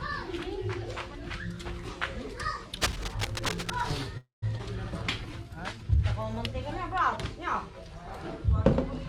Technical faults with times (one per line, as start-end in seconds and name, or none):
2.81-3.98 cable scratch noise
4.17-4.44 call audio freeze
4.58-4.61 skip ahead
5.20-5.98 jitter buffer slow-down